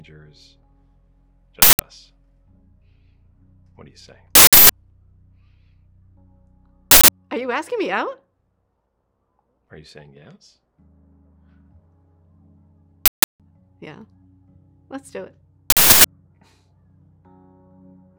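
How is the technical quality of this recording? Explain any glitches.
Five loud glitches break up the recording. All come from an uninitialised buffer. They hit at 1.62, 4.35, 6.91, 13.06 and 15.70 s. Each is a burst of harsh digital noise lasting 0.17 or 0.34 s, which fits blocks of 8192 or 16384 samples. Leftover memory was played as audio before real samples were written.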